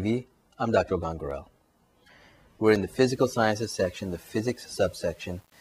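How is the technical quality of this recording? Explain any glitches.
The recording has two kinds of technical fault: brief dropouts early on and a grainy, coarse quality in the second half.

Block of digital silence, at 1.31 s and 2.76 s: the audio path most likely failed to deliver samples in time, so short stretches were filled with zeros. The first gap lasts about 2.9 ms, fitting a 128-sample buffer, and the second about 1.45 ms, fitting 64 samples. Each abrupt cut and return is heard as a tick or dip.

Low bit depth without dither, from 3.10 s to the end: the signal was likely reduced to 8 bits and rounded with no dither, so the quantisation error tracks the audio itself. This adds gritty distortion roughly 35 dB below the signal, most noticeable on quiet passages.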